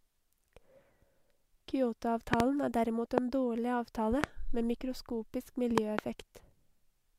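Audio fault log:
2.34–2.42 s, 3.18–3.20 s, 4.24–4.26 s and 5.78–6.01 s, loud pop: sharp thumps far above the speech, which carries on underneath. The first lands just before "er derimot en dårlig" and is a double pop. The second sits between "er derimot" and "en dårlig". The last follows "med mikroskopisk" and is also doubled. These are likely voltage spikes from a switch, plug or static.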